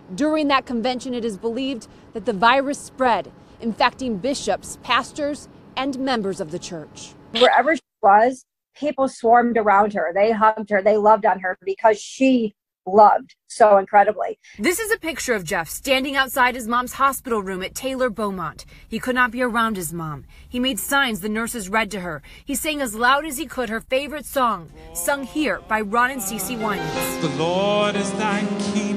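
Nothing goes wrong here, with no technical faults to point to anywhere in this audio.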